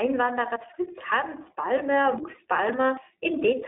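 Speech passed through the iLBC codec throughout: a plainly rough, synthetic texture, and a spectrogram shows a hard ceiling with nothing above 3.8 kHz; the codec runs in its 20 ms frame mode.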